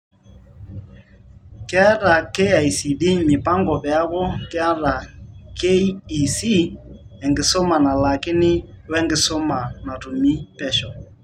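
No technical faults occur at any point in the clip.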